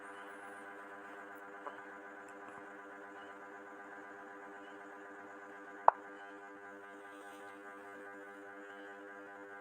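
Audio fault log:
6.07–9.61 s, time-stretched section: from 6.07 s to the end, the pace drops abruptly to about 0.61 times the earlier rate while the pitch holds steady, so the final stretch drags compared with what precedes it. This is likely a stretch applied in software to fill a target length, lengthening the audio by repeating short segments rather than by resampling, which is why the timing slows without any downward shift in pitch.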